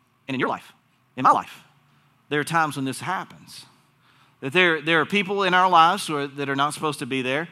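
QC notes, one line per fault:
0.0–1.5 s, time-stretched section: the opening speech runs at twice normal pace while the pitch stays put, so it comes across choppy and rushed before dropping back to normal speed. Likely software squeezing that stretch to fit, discarding short slices to hold pitch.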